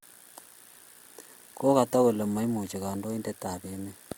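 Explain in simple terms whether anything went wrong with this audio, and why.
Nothing went wrong here; the speech comes across as a normal recording with no glitches, dropouts or other technical trouble to point to at any moment.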